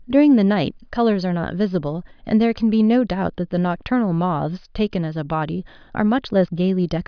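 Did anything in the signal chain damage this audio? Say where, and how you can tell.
No, nothing in the signal chain has left an audible mark on this speech recording. At no moment can any stage, from the wiring through to playback, be heard altering the sound.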